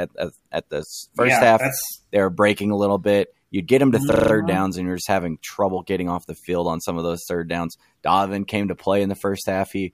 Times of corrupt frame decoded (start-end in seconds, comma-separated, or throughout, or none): none